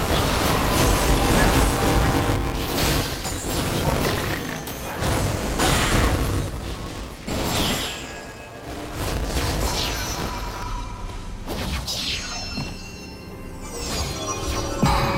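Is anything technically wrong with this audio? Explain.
Yes. From 0.0 to 10.63 s there is buffer tearing: the writer and reader of a ring buffer have slipped, so roughly a fifth of each period replays audio about 20 ms stale. Hard joins produce a robotic 200 Hz buzz that follows the signal, never gapping into silence like an underrun.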